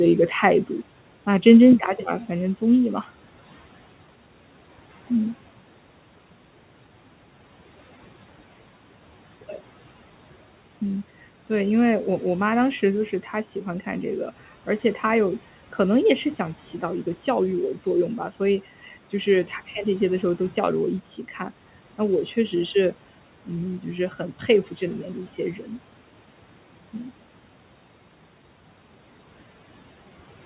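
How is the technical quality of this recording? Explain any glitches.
The recording has two glitches worth flagging: a level drop that sets in early and never recovers, and a brief spot where the noise suppressor bites into the speech. The narrow, phone-like band topping out around 4 kHz is just the call codec, consistent with something like G.711 telephone coding.

From 1.78 s right through to the end, the speech falls by about 6 dB and stays there. That's the signature of one channel dropping out: the speech was common to both stereo sides, so when one side goes silent and the pair is folded to mono, the sum loses half its amplitude. The likely culprit is a lost channel, and you hear it as the whole thing suddenly sitting noticeably quieter for the rest of the clip.

Around 25.56 to 25.7 s there's a moment of speech cut by the noise suppressor. For roughly a tenth of a second the suppressor mistook part of the speech for background and ducked it by up to about 7 dB along with the noise. 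It's quick, but that bit of speech comes across faint and a little swallowed.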